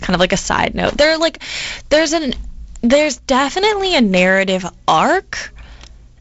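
No technical faults can be heard in this speech, which comes through as G.722 wideband telephone audio.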